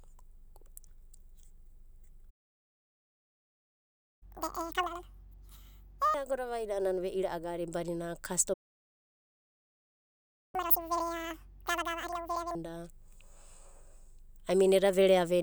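Speech clip with two playback stalls, silent from 2.30 to 4.23 s and 8.53 to 10.55 s (about 2 s each), likely from the player running out of data or blocking. Each is followed by catch-up at higher speed, at 4.23 to 6.14 s and 10.55 to 12.55 s, as the backlog is resampled at double speed, raising pitch by nearly an octave before returning to normal.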